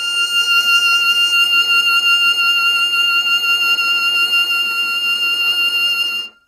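Throughout, the music was likely passed through low-delay AAC compression at a starved bitrate, near 24 kbps. Short frames blur harmonics into a rough, grainy tone.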